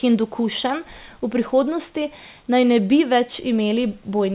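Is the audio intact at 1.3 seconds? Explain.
Yes, at 1.3 seconds the speech is intact, with nothing more than the 4 kHz upper limit you would expect from a normal G.711 call path.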